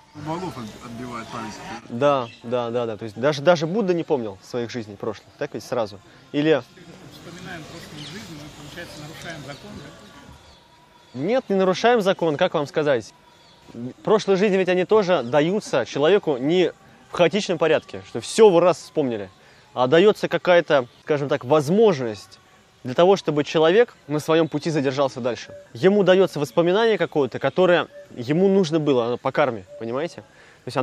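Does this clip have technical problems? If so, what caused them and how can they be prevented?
No, this clip has no technical problems, so there is nothing to prevent.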